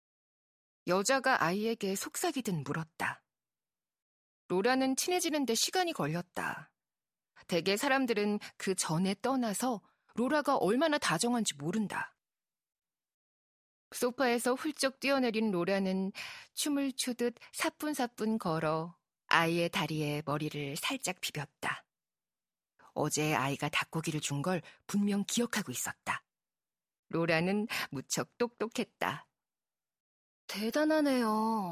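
The speech recording carries no audible technical faults at any point in the signal.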